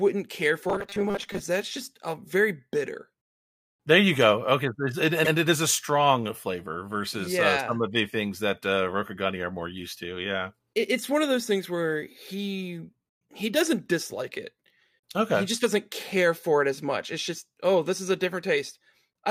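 From 0.70 to 1.41 s, just before "that's just a uh", there's robotic sound, likely from repeated short buffers: a 200 Hz metallic buzz, with roughly half the audio replaced by 5 ms repeats. At 5.24 to 5.32 s, right before "it is a strong", repeated frames replay a 78.4 ms block once, which fits about three frames. You hear a quick stutter, and the clip runs 78.4 ms longer.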